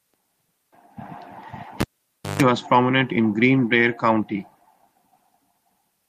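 At 1.80 s there's a sharp pop and the speech drops to near silence for about 0.57 s, which is a classic cable pulled and plugged in. As the plug goes back, only the tip touches first, so you get roughly 150 ms of 50 Hz mains buzz before a second pop at 2.42 s and the signal snaps back just before "was prominent in". The live connection breaking and remaking causes both clicks.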